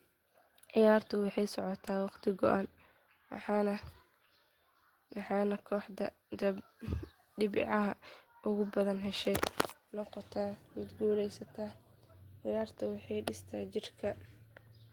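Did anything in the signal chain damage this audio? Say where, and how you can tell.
No, nothing in this speech recording stood out on listening as damage from any stage of the signal chain.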